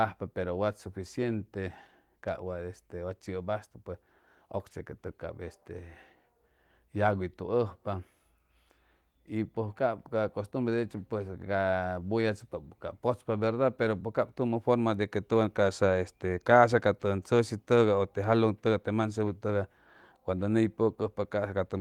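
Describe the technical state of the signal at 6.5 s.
At 6.5 s the signal is intact, with the speech coming through the Opus voice compression cleanly and nothing faulty to be heard at that moment.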